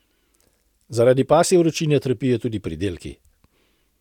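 No technical faults can be heard anywhere in this recording.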